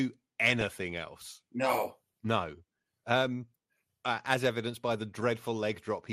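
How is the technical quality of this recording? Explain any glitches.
The speech is audibly degraded throughout, and there is one short burst of extra damage near the start.

Across the whole recording the sound is dull and plainly gurgling, with a granular roughness in the upper range. This is likely MP2 compression at a low rate, which fits around 80 kbps. Layer II splits the signal into 32 sub-bands, and with so few bits the upper bands switch off or flicker while the remaining ones are coarsely quantised.

From 0.50 to 0.72 s a burbling distortion sits over the speech. This is DAB burbling. A small share of bit errors slipped past error correction and corrupted sub-band samples, so single bands carry short blips of noise. That fits 11 corrupted frames.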